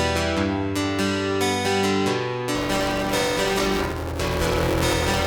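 Buffer tearing from 2.55 s to the end: a steady 200 Hz robotic buzz as roughly half of each buffer replays audio about 10 ms old.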